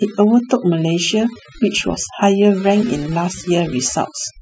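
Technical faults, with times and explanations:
Throughout, overdone noise removal: a noise reduction stage set too hard has switched off individual frequency bands wherever they sat near its noise estimate, taking quiet speech detail with them. Unlike plain low-bitrate coding, the gaps between phrases collapse into near silence with twinkling specks.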